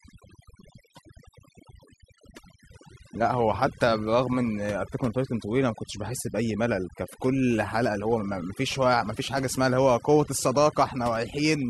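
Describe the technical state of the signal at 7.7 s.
At 7.7 s you're hearing overdone noise removal, present across the whole clip: bands near the noise floor get gated off, so the background twinkles.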